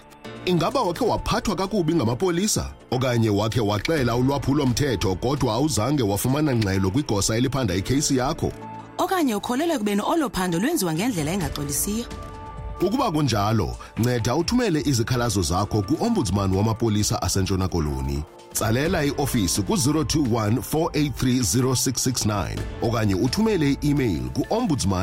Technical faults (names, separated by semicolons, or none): none